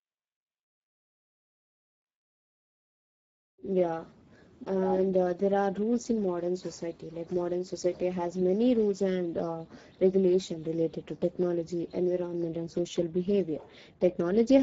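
Throughout, the speech has been squeezed through the Speex codec at a low setting, and the sound fits a bitrate near 10 kbps, leaving too few bits for the excitation signal. The result is plainly hoarse, noisy speech, with nothing above 7.7 kHz.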